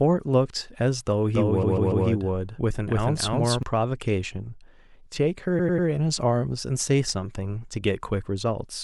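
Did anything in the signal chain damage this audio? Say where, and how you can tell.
Yes. From 1.34 to 3.63 s the speech is accompanied by a full-level echo trailing about a third of a second behind, with no decay or room colour, starting and stopping abruptly. This doubled audio track likely comes from a second, slower capture path mixed in.

Repeated frames cause a stutter at two points. From 1.62 to 2.05 s, a 144 ms block plays three extra times, adding 432 ms. From 5.58 to 5.87 s, a 96 ms block repeats three times, adding 288 ms. Duplicated compressed frames at the codec or storage stage explain this.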